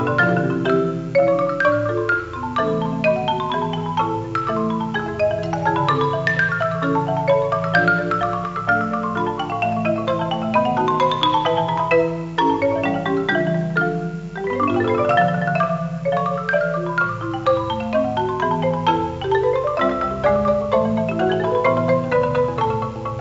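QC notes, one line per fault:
No faults to note.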